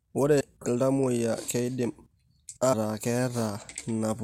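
A speech recording with two brief glitches from damaged data in a compressed stream: a quick glitch at about 0.40 s and another short blip from 2.72 to 2.74 s, roughly 20 ms long. Both point to corrupted bytes in the encoded file. At each spot the decoder hit frames it couldn't read properly, lost sync and had to hunt for the next good frame header, so you hear a tiny glitch before the audio picks up again.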